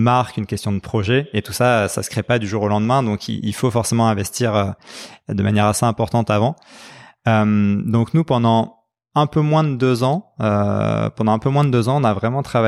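No faults turn up anywhere in this recording; the speech just rolls along without a single glitch worth pointing out.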